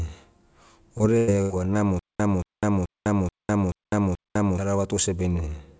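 A speech recording passed through a call codec, with band-limiting that fits G.722 since nothing reaches above 8 kHz. From 0.98 to 1.02 s a brief smear marks short concealed packet loss: about 20 ms never arrived, and the receiver extended the preceding sound to bridge it. Two longer held, fading stretches follow at 1.18 to 1.30 s and 1.42 to 1.52 s. Each is a burst of packet loss, roughly 100 ms and 80 ms missing, patched by continuing and attenuating the last sound before the audio picks up further on. Between 1.99 and 4.58 s a fragment of about 0.23 s repeats six times at an even 0.43 s pace, separated by about 0.20 s of digital silence. This is a stutter with silent gaps, likely a stalled stream replaying its last chunk at each retry, so the audio that belonged there is gone.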